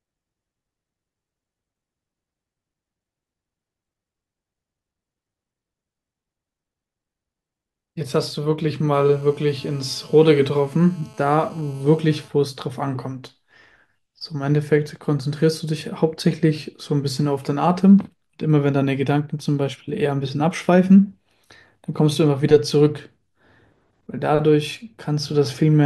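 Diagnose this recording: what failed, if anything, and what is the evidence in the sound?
GSM phone buzz in the analogue wiring, 8.94 to 12.28 s: steady raspy 217 Hz buzz, about 29 dB down, from a nearby phone call's radio bursts getting rectified.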